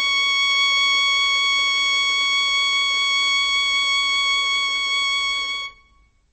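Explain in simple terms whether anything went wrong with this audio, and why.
Yes, something's off, and it runs the whole way through this music, start to finish. The top end is simply gone: nothing comes through above about 8.2 kHz, so everything sounds dull and boxed-in. The damage is plainly audible, and the likely culprit is heavy MP3 compression. When the encoder is starved of bits, it chops off the treble at a fixed point and drops quieter detail, which flickers in and out and leaves a watery, swirly texture.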